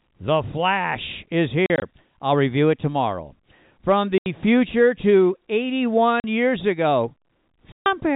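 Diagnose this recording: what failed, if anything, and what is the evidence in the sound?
Network stage: packet loss filled with silence punches hard-edged holes at 1.66–1.82 s (scattered), 4.18–4.26 s, 6.20–6.24 s and 7.72–7.86 s. Gaps are multiples of 20 ms, fitting 20 ms packets. Waveform: flat silent stretches. Spectrogram: blank vertical bands.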